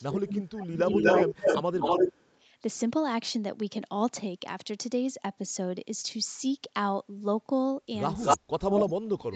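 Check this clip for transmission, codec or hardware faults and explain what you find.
Two faults recur through the speech: double-talk suppression and echo leak.

Speech suppressed in double talk, 0.0 to 0.77 s, 1.26 to 1.79 s and 8.36 s to the end: the speech dips by up to about 25 dB, and by about 40 dB at the end. The likely cause is an echo canceller muting both sides during overlapping talk.

Echo leak, 0.9 to 1.58 s, 1.8 to 2.38 s, 8.21 to 8.38 s and 8.76 to 8.83 s: a copy of the speech trails by 246 ms, about 5 dB louder than the speech, and about 5 dB quieter in the last one. Likely cause: loudspeaker pickup that the far end's canceller failed to remove.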